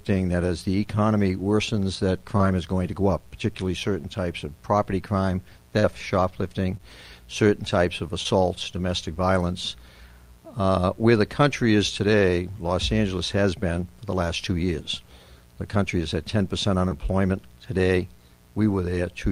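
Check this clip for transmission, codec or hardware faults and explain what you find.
Five brief dropouts of short concealed packet loss occur, at 2.37, 5.79, 6.77, 8.23 and 16.89 s. Each covers about 20 ms of missing audio, except the one at 5.79 s, which loses 40 ms. The decoder bridged each gap by extending the preceding sound's pitch or noise texture, then crossfading back, so each one is heard as a quick smear or wobble. On a spectrogram, harmonics flatten or blur briefly. The waveform shows a short, oddly repetitive or softened stretch.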